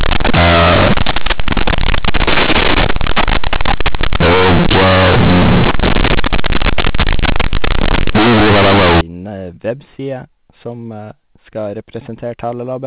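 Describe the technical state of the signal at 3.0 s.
At 3.0 s the signal sits inside a stretch of companded audio read as linear, running from the start of the clip to 9.01 s. A-law telephone bytes are being played back as plain linear 8-bit samples, skipping the expansion step, so every sign change throws the waveform across roughly half its range. The speech turns harsh and buzzy, quiet passages blow up to the level of loud ones, and pauses fill with heavy noise.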